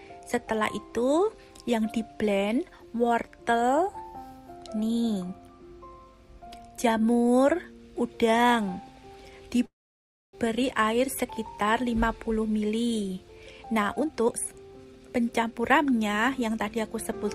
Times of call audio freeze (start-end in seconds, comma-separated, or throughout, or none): 9.65-10.35